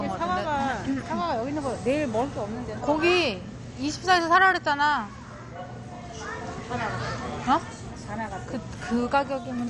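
Throughout the clip the sound is dull and gurgling, with granular, watery distortion. It is likely MP2 compression at a low rate around 48 kbps. A spectrogram shows nothing above 11.3 kHz and upper bands flickering on and off in blocky patches.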